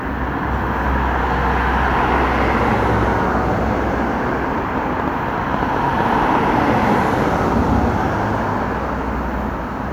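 From 4.52 to 7.53 s there's a train of clicks: around thirty sharp, similar-shaped pops at an uneven pace, roughly 9.65 a second, sitting well above the sound. They tick right through quieter stretches too. Likely interference from nearby gear or a faulty connection or power supply.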